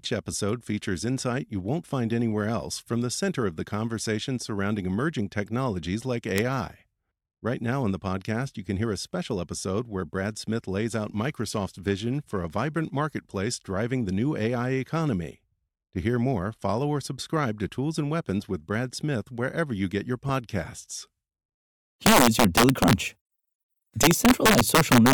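At 6.38 s, a sample sum reaching the integer limit wraps to the opposite sign, producing one sharp integer overflow crack in the speech. A sudden voltage spike, likely from a switch or static discharge, adds a loud pop a few decibels above the speech from 20.29 to 20.31 s. Integer overflow returns when the gain pushes peaks about 6 dB past the limit from 22.06 to 22.93 s and about 4 dB past it from 24.03 to 25.13 s. Those peaks flip polarity, giving violent cracks harsher than clipping.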